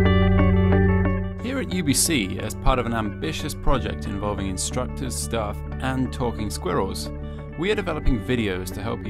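No technical faults can be heard anywhere in this audio.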